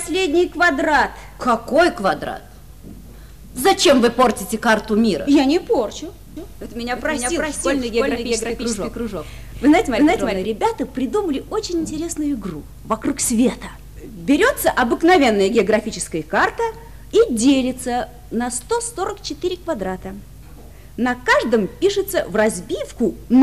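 Audio with a doubled audio track from 6.37 to 10.45 s: a full-band copy trails about 300 ms behind at roughly equal level, likely from a second, slower capture path.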